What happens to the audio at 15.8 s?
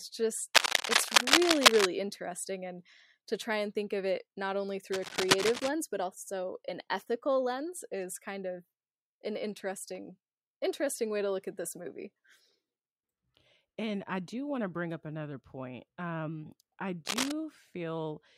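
Nothing goes wrong at 15.8 s; the speech carries on intact through that moment, with no dropout, click, distortion or other fault to be heard.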